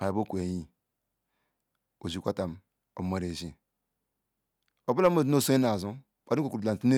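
No technical faults can be heard anywhere in the speech. Nothing in it calls for comment from a technical point of view.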